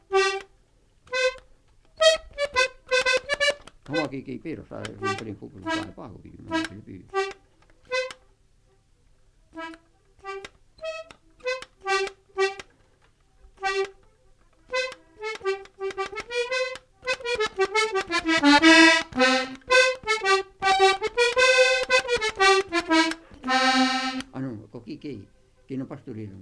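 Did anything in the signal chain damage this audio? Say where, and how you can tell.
No, nothing along the chain has audibly damaged the signal at any stage.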